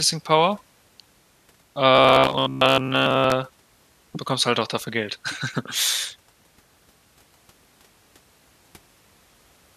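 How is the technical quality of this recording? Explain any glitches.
The recording has one glitch. From 1.95 to 3.32 s, robotic sound from repeated short buffers: audio likely arrived too slowly, so a roughly 15 ms chunk was looped for most of that stretch, imposing a rigid, metallic buzz near 66.7 Hz.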